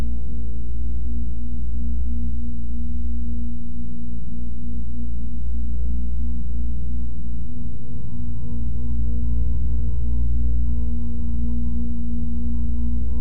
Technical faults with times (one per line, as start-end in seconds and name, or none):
0.00-13.20 DC offset